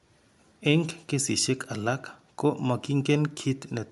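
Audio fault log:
Throughout: Bluetooth LC3 compression. The speech has nothing above 11.6 kHz, and the upper band that remains has a plainly audible breathy, grainy edge. That texture comes from a transform codec discarding high-frequency detail and filling the emptied bands with noise. The likely cause is the LC3 codec of Bluetooth LE Audio. The amount of damage fits a stream of around 48 kbps coded in 10 ms frames.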